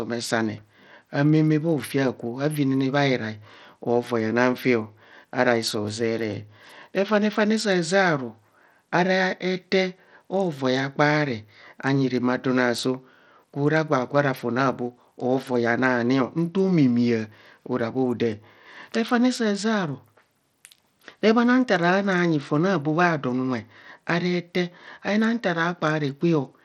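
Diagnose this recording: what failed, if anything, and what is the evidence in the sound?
The speech has a gritty, grainy edge throughout, with the treble thinning out and flickering in and out. The likely cause is Bluetooth SBC compression at the codec stage, with a starved bit pool leaving the upper sub-bands bare, which fits a low bitrate around 80 kbps.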